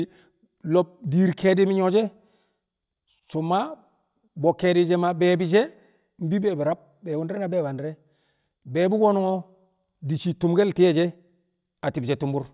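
No technical faults can be heard anywhere in this speech recording. Nothing in it stands out as a problem to describe.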